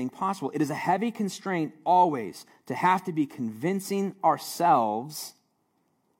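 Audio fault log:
No faults were heard in this speech recording. Nothing in it calls for a log entry.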